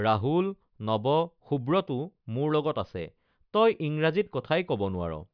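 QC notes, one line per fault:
Nothing to flag here, this one's good to go as far as faults are concerned.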